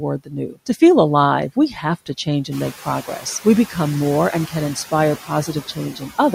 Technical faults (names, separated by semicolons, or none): noise suppressor artifacts; speech cut by the noise suppressor